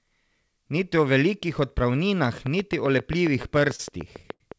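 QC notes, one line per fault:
2.47–4.58 s, train of clicks: Right after "o velikih odpravninah", a regular run of sharp pulses begins at about 7.4 per second and continues to the end. Each click peaks around 10 dB above the speech and keeps much the same shape, so it sounds like steady ticking over the talker and in the pauses. The likely cause is interference from nearby equipment or a faulty connection or power supply injecting the pulses.
3.31–3.80 s, repeated stalls (stutter): Packets arrived late or more slowly than playback consumed them, and the jitter buffer ran dry four times within half a second. Each time, the receiver continued the last sound until fresh audio came in. About 70 ms was filled this way, roughly 14% of the span, with the longest hold 33 ms. Nothing is lost, but the speech drags and catches, giving a stuttering rhythm.
4.33–4.41 s, short stall from a late packet: One packet missed its playout time, and the buffer emptied. 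The receiver stretched the preceding sound for about 72 ms until the packet arrived, then resumed from the same point, with the delay stepping up by that amount. No speech is missing, but one sound is held unnaturally long with a slight buzz or dip. This happens over the call's G.722 path, which carries nothing above 8 kHz.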